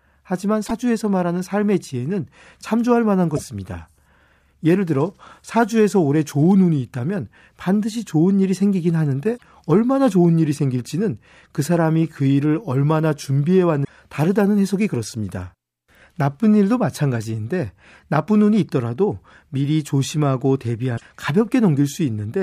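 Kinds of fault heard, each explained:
Damaged data in a compressed stream: five brief breaks, at 0.64–0.71 s, 3.33–3.39 s, 9.34–9.42 s, 13.81–13.89 s and 20.94–21.02 s, each about 60 to 80 ms long. At these points bytes in the encoded speech were lost or corrupted, so the decoder could not read the frames correctly. It lost its place in the stream and had to find the next valid frame header before normal playback of the speech resumed.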